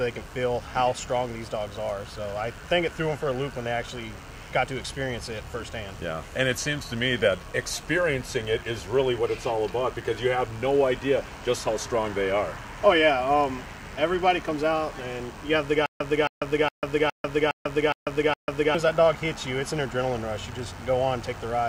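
A DECT cordless phone buzz runs under the whole clip, sitting roughly 30 dB below the main sound. A nearby handset or base station transmits a brief radio burst every 10 ms, and the audio circuitry rectifies it into a 100 Hz buzz. Mains hum is a smooth low tone at 50 or 60 Hz. This buzz is thin, gated and full of harmonics, and its steady 100 Hz pulse rate stays fixed whatever the audio does.

From 15.86 s to 18.75 s there is a stutter with silent gaps. The same 267 ms fragment plays seven times, each followed by about 145 ms of digital silence, so it repeats every 413 ms. The likely cause is a player or stream that stalled, replayed its last buffered chunk at each retry, then ran dry. Plain dropouts leave only gaps. Here the fragment repeats identically at an even pace, and whatever audio belonged in that span is lost.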